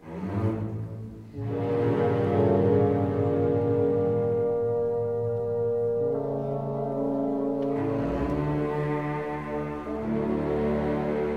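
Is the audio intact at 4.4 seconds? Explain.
Yes, at 4.4 seconds the audio is intact, with no dropout, click, distortion or other fault.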